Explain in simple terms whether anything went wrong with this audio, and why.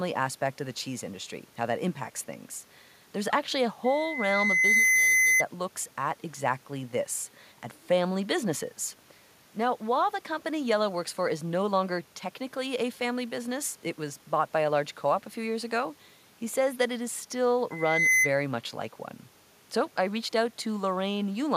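Loudspeaker feedback squeal hits at 3.84 to 5.44 s and 17.71 to 18.32 s. A microphone hears its own loudspeaker, and a 2 kHz tone swells into a squeal.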